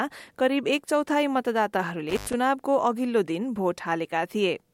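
From 2.09 to 2.34 s, an intermittent contact briefly opens the line for about 0.10 s. Crackle at both edges and faint hiss beneath distinguish it from a clean digital dropout.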